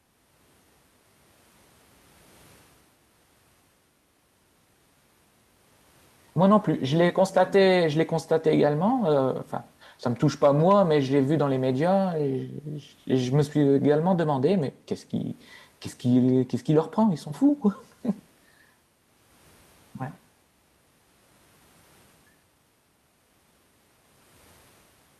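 There are no technical faults to describe in this speech clip.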